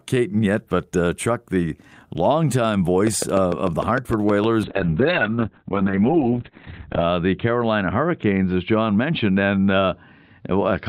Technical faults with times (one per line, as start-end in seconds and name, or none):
3.07-4.45 train of clicks
4.68-10.89 call bitrate drop